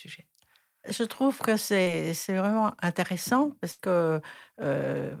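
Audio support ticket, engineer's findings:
Short concealed packet loss at 1.82 s. Brief smear in the speech, about 40 ms missing. Receiver jitter buffer concealed it by extending the previous sound.

Burst of packet loss at 3.71 to 3.80 s. About 80 ms lost. Concealment holds the last sound and fades it, then speech resumes with a gap.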